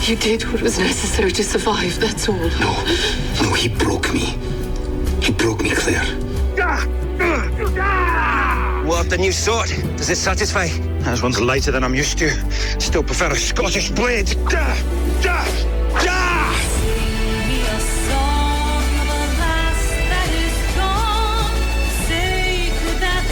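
No technical faults can be heard anywhere in the recording, and the signal stays steady and intact for its whole duration.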